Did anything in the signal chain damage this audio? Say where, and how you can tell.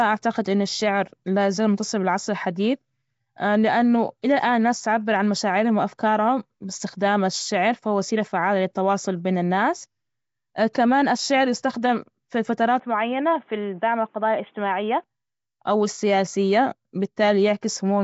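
Yes. At the codec stage, the whole clip has plainly audible coding damage and nothing above 7.7 kHz. The smeared, hissy texture likely comes from Nellymoser compression, at a setting that fits a 32 kbps stream. That codec spends a fixed bit budget on short blocks, so weaker bands receive no bits and are filled with synthetic noise. That noise fill sits around the speech, and the coarse block coding blurs its detail.

At the input device or driver stage, from 12.79 s to 15.04 s, right after "كمان الشعر يستخدم في", the bandwidth drops abruptly to nothing above 3.6 kHz. A new noise floor appears about 40 dB below the speech. The level stays about the same and there is no gap at the switch. The full band returns at 15.04 s. This pattern likely reflects the input switched to a poorer device with its own narrower response and noise.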